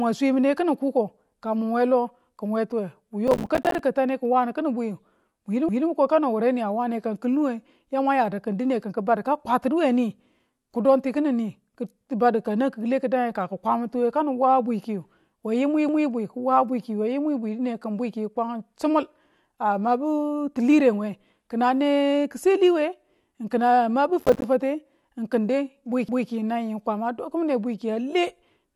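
From 3.28 to 3.79 s the speech breaks into gritty crackle. This is processor overload crackle. The processor missed dozens of deadlines in a row, and each miss left a tiny hole of silence. The gaps fit buffers of about 5 ms. At 5.69 s a stutter appears. Overlapping chunks cause it: each chunk starts 200 ms before the last one ends, so that stretch plays twice. The same repeat returns at 15.89 s. The crackle comes back from 24.20 to 24.44 s. The stutter repeats again at 26.09 s, keeping its 10-second rhythm.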